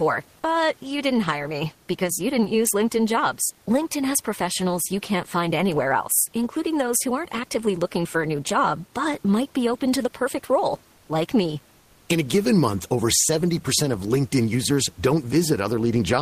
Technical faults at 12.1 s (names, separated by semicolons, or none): comfort noise in place of the background